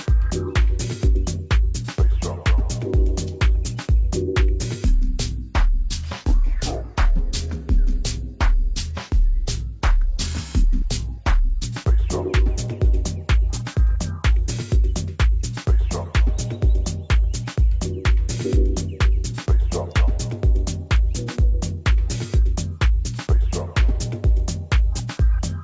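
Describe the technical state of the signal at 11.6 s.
At 11.6 s the wrong sample rate fault is just ending, having run from 4.85 to 11.64 s. Sound fitting a 24 kHz recording is played as if at 16 kHz, so it runs at two-thirds speed and about 7 semitones low. Pitch and tempo fall together, unlike a pitch shift or time stretch.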